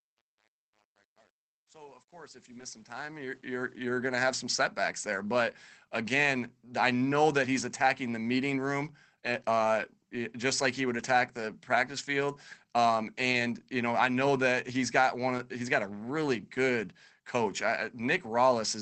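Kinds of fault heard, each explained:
Truncation distortion on a fade: the fade-in turns gritty at its quietest, which fits an undithered volume stage keeping only around 9 bits.
Lost packet rebuilt from error correction: lost bits of the call were filled from low-bitrate backup copies, so there is no gap, just short rough, noisier 20 ms patches (40 ms near 11.0 s).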